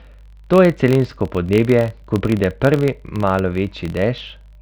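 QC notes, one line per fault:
throughout: filter restarted on every block. Each block starts from cleared filter state, so a tick at each boundary forms a 43.1 Hz buzz, which fits 1024-sample blocks.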